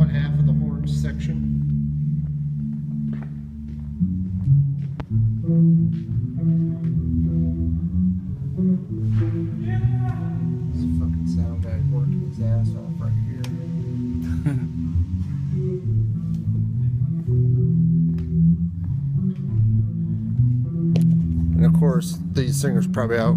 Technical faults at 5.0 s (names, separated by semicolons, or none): loud pop